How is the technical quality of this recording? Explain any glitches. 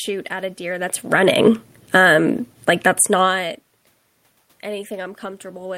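One fault affects the technical quality of the recording.

Automatic gain falling, from 0.98 to 2.91 s: the automatic gain control judged the input too loud, or its background noise too strong, and pulled its gain down steadily, by about 9 dB in total. The speech starts loud, then sinks, and the room noise sinks with it, which shows that the level change comes from the gain control rather than from the talker. The talker shifting position near 1 s and 3 s causes separate, natural changes in loudness.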